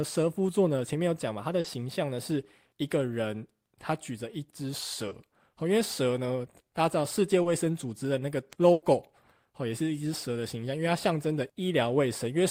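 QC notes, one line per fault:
1.60–1.65 s, 5.08–5.12 s, 7.42–7.46 s: short concealed packet loss. Each is a brief smear or wobble in the speech. Between 30 and 40 ms of audio failed to arrive in time, and the decoder filled the hole by extending the preceding sound before rejoining the real signal.
8.72–8.83 s: burst of packet loss. A held buzz or fading hiss replaces about 100 ms of speech, with no silent stretch, and then speech resumes further along. Several consecutive packets were lost, and the receiver continued the last sound while turning it down.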